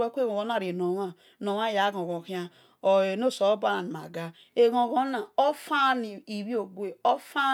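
Nothing goes wrong anywhere in this bit of speech, so there's simply no fault to point to at any moment.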